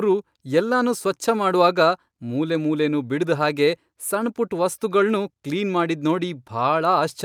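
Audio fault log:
No fault is heard in this speech clip.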